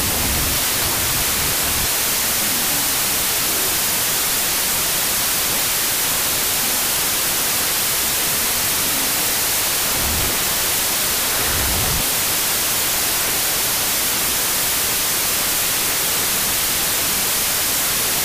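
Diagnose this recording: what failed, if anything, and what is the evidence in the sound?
Sample-format conversion broke: it's a wrong sample width fault throughout. The speech sits under loud hiss, an octave low at half speed. That fits 32-bit data read as 16-bit: each sample splits into two, one half keeping the real signal's top bits and the other pure noise.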